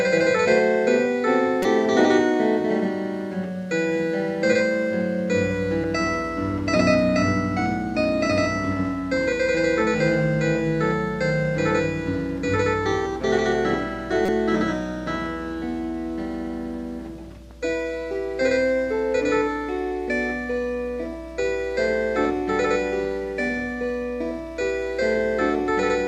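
Damaged data in a compressed stream causes brief blips at 1.63–1.65 s, 5.84 s and 14.26–14.29 s: corrupted frames make the decoder misread data and lose sync. Each shows as a thin broadband vertical smear on a spectrogram and an abrupt waveform discontinuity.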